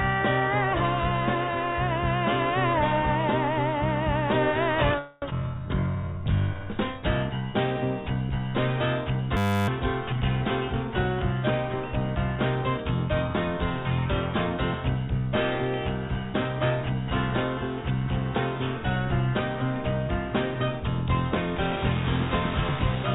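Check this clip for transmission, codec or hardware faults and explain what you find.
Six faults are audible: a cluster around 5 s, then at 9.4 s, around 12 s, and from 21.56 s to the end. Everything sits inside the 4 kHz ceiling of the narrowband call path.

From 4.99 to 5.24 s, a call audio freeze: sound stalls and is stretched into a fading buzz for about 230 ms, likely from delayed packets draining the jitter buffer. On a spectrogram this shows as smeared horizontal bands.

At 5.30 to 5.33 s, a skip ahead: around 150 ms of audio is dropped and the two sides are spliced almost directly. The waveform shows an abrupt seam.

From 5.42 to 6.65 s, a jitter buffer slow-down: repeated pitch periods play the sound at 89% speed, adding 151 ms. It sounds drawn out, and the spectrogram shows stretched harmonics at unchanged pitch.

From 9.37 to 9.68 s, a system hang loop: a 10 ms fragment cycles about 30 times, giving a steady 100 Hz buzz. 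The waveform repeats identically, and roughly 300 ms of real audio is lost.

From 11.74 to 13.29 s, a jitter buffer speed-up: short pitch-period cuts play the sound at 107% speed, removing about 100 ms. It sounds hurried, with compressed spacing visible on the spectrogram.

From 21.56 s to the end, low bit depth without dither: the waveform has 4-bit rounding steps, likely from requantisation. The grainy, signal-following distortion sits around 10 dB below the sound and appears on the spectrogram as broadband hash.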